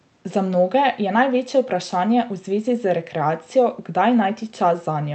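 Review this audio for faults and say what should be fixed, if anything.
Nothing here needs fixing: the speech comes through a normally working WebRTC call path, with the codec's ordinary coding noise and a top end that stops at around 8 kHz, which is what that path produces.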